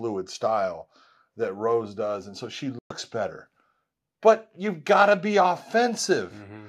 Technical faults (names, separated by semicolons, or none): corrupt frame muted